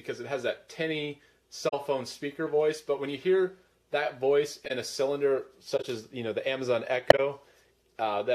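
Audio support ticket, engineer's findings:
Concealed corrupt frames at 1.68–1.74 s, 4.65–4.71 s, 5.77–5.85 s and 7.10–7.19 s. Corrupt frames concealed by the AAC decoder muting or scrambling each damaged run of frames.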